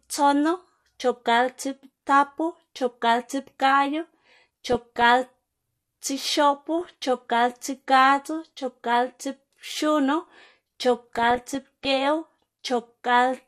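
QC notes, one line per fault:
Throughout: MP2 compression. The speech sounds dull and gurgling, with a granular roughness. This points to an MPEG Layer II encode at a low rate, likely around 80 kbps. Too few bits reach the upper sub-bands, so some of them switch off entirely and the rest are coarsely quantised. On a spectrogram the top end looks ragged, with horizontal bands above a few kHz blinking in and out from frame to frame.
4.67–5.02 s, 6.81–6.93 s, 10.96–11.85 s: DAB burbling. In each of these spans the speech is overlaid with short blips of noise in single sub-bands. The second burst ends just before "chopgalptsiꞌpgadzu chopgalptsiꞌpxunu". Bit errors have slipped past error correction into the MP2 data. The corrupted samples put short blips of noise in single sub-bands, and corrupted scale factors make sub-bands leap in level for up to a frame. A spectrogram shows isolated rectangular blocks of energy at odd frequencies, and the waveform shows brief irregular spikes.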